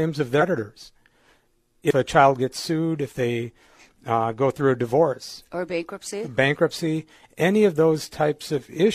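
Compressed frames skipped at 0.38 to 0.43 s and again at 1.86 to 1.92 s, just before "a child gets sued". The speech jumps forward because whole frames of about 46.4 ms each never get played: around seven frames, roughly 300 ms, in the first gap, and about three, near 150 ms, in the second.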